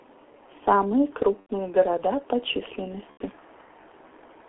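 Throughout the speech, the sound is muffled and hoarse, the signature of the G.723.1 codec. Almost nothing survives outside a narrow telephone band of roughly 300 Hz to 3.4 kHz, and consonants smear because the codec's voice model updates only every 30 ms. The heavy damage fits its low rate of about 6.3 kbit/s. Plain band-limiting would sound thin but clean. The grainy, rasping texture here points to a low-rate vocoder.

At 1.40 s and again at 3.11 s, there is VoIP packet loss concealed by the speech codec. Each gap lasts about 90 ms, which fits three lost 30 ms frames. The decoder fills the hole by repeating its last pitch and filter at falling gain, so the sound stretches into a fading buzzy tone or coloured noise, and the third lost frame is muted. The voice stays weak for a moment after 1.51 s and 3.22 s, while the decoder's state recovers.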